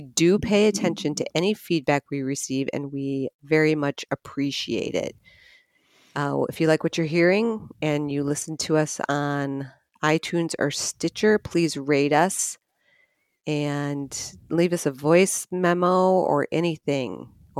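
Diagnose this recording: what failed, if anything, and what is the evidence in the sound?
Nothing failed: the speech signal stays steady and continuous throughout, with no audible defect traceable to any stage of the chain.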